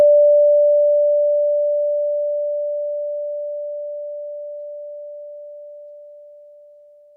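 No faults detected anywhere in the music.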